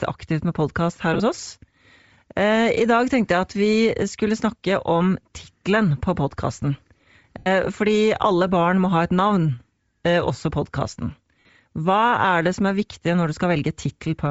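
Across the whole speech clip there is a breathy, grainy edge on the voice, most likely from Bluetooth LC3 compression. The codec damage is plainly audible and points to a low setting around 32 kbps with short 7.5 ms frames. Starved of bits, the encoder discards much of the upper spectrum and substitutes shaped noise. On a spectrogram, the high band shows blotchy noise patches in place of clean harmonic striations, and the waveform shows no obvious damage.

The first lost LE Audio frames come at 1.14 to 1.21 s, right after "aktivt med podkast her". About 37.5 ms of audio is missing, scattered over 60 ms, with the longest gap around 20 ms. The decoder fills each gap by repeating the last spectrum with scrambled phase, so the voice briefly turns into a hissy smear. On a spectrogram, the harmonics blur into vertical noisy columns.

A longer loss of 82.5 ms follows at 7.39 to 7.47 s. Here the concealment keeps fading, so the waveform envelope sags audibly before the sound returns.

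At 11.40 to 11.49 s, after "eh også podkasten", about 75 ms is lost across 90 ms, including a run of about 50 ms. It gives a similar smeared, dipping patch.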